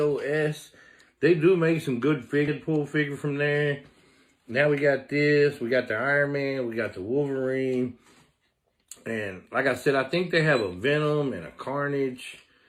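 At 2.47 s the audio has a skip ahead: about 0.7 s of material is missing, and the two sides are butted together with no silence or fill between them. That separates it from a dropout or concealed packet loss, where you would hear a gap, a fade or a smeared patch. Here the sound simply lurches forward. A jump this size with nothing inserted points to a backlog of audio being discarded while later audio was already queued. Shortly afterwards, from 2.68 to 3.65 s and again from 4.28 to 6.55 s, the audio plays hurried, at about 110% and 109% speed. This is a jitter buffer speed-up. Tiny pitch-period-length slices are cut out repeatedly to drain excess buffered delay, removing roughly a tenth of a second in the first stretch and a fifth in the second. Because the pitch stays put while the timing tightens, it differs from a resampling or clock-rate error, which would raise the pitch along with the speed.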